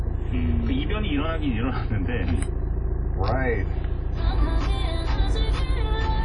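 From start to finish the sound carries plainly audible WMA compression damage, likely from a Windows Media Audio encode at a low bitrate, which fits roughly 32 kbps. Nothing remains above 10.1 kHz, and the transform's long blocks smear quantisation noise across tens of milliseconds, so transients ring and textures turn washy, with a hiss that swells and fades with the signal. That breathing, smeared noise separates it from a plain low-pass filter, which dulls the top without adding grit.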